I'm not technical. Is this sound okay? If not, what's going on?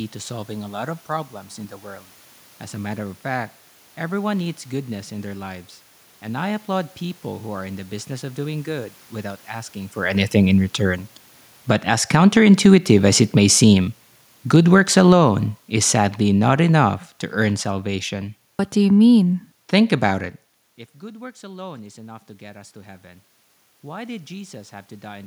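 No. The recording's volume is being adjusted automatically and clumsily.

Automatic gain falling: the system decided the speech was too loud and turned its volume down gradually, from 11.55 to 12.33 s and again from 13.17 to 18.14 s. The voice and the room noise behind it sink together.

Automatic gain rising: the system decided the speech was too quiet and slowly turned it back up, from 12.08 to 13.19 s and from 21.0 to 25.22 s. The voice and background swell together, as if someone were turning a knob.

Around 12 to 13 s the level dips and recovers quickly, which sounds like a brief pumping. The last rise follows the talker moving farther from the microphone around 20.5 s, with another move around 9.5 s.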